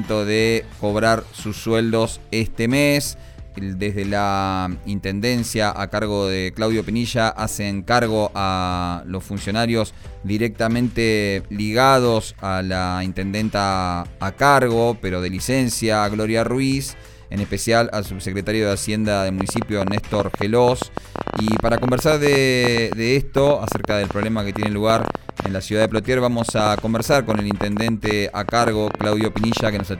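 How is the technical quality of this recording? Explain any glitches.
A train of clicks spoils the last stretch of the recording. From 19.41 s to 29.81 s, a sharp pulse of much the same shape keeps cutting in at about 10 per second. The spacing is uneven, adding up to around a hundred clicks that stand roughly 15 dB above the surrounding sound. The cause is likely electrical interference or a faulty connection or power supply injecting pulses into the signal. Unlike random crackle or isolated pops, these similar ticks persist through quiet gaps.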